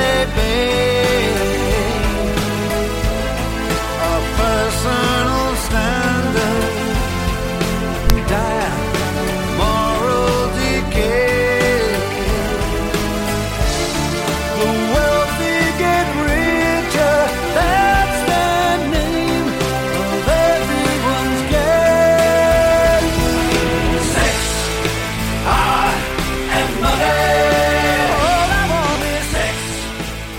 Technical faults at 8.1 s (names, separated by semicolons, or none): corrupt FLAC frame